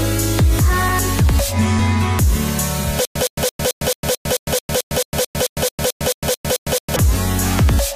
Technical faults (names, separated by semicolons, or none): stutter with silent gaps